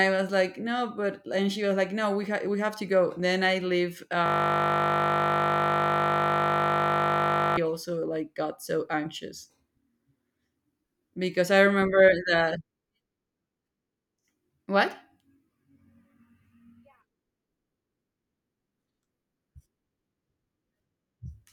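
Right after "I leave", from 4.26 to 7.57 s, there's a system hang loop: a 20 ms buffer repeats 166 times, giving a steady 50 Hz buzz until "also like got so".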